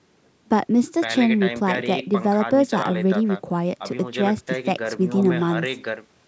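A speech recording that has passed through a call's microphone processing, and nothing is technically wrong with it.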